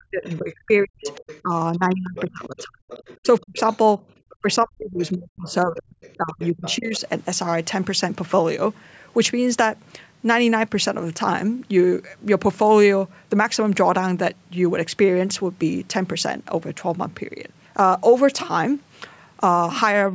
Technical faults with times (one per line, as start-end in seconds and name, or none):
0.00-7.00 speech suppressed in double talk
0.24-0.35 other side's voice leaking through
1.02-1.41 other side's voice leaking through
2.17-3.77 other side's voice leaking through
4.30-7.00 other side's voice leaking through